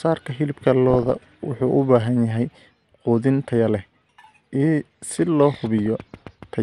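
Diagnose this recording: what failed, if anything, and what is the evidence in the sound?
Throughout the speech it sounds dull, gurgly and grainy. That's likely MP2 compression at the codec stage, with upper sub-bands starved of bits, consistent with about 80 kbps.

DAB burbling from reception errors burbles at 0.90 to 1.34 s and 5.59 to 5.86 s. Stray bit errors, well under one percent, put short blips of noise into single sub-bands.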